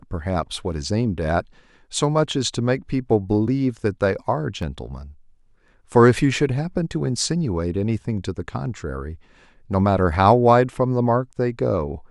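A tick at 4.62 s is a block of digital silence lasting 0.73 ms (32 samples), which fits an output buffer left unfilled, so the speech cuts abruptly to silence and back.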